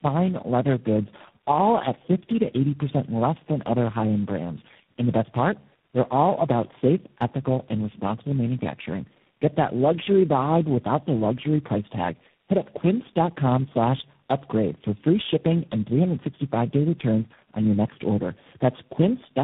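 Across the whole speech clip, tandem speech coding degrades the sound: the call appears to have been decoded and re-encoded at successive network borders, with each coder working on its predecessor's damaged output. The result is rough, muffled and warbly speech, with nothing above 3.7 kHz, which fits four low-rate speech codecs in a row such as G.729A, GSM full rate and G.726. One low-bitrate codec alone would sound less rough and less smeared.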